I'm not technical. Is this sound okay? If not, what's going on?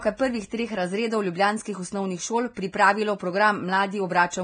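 No. Throughout, likely Vorbis compression: the speech sounds hissy and grainy, with nothing above 9.7 kHz, because treble detail is stored too coarsely and turns to noise.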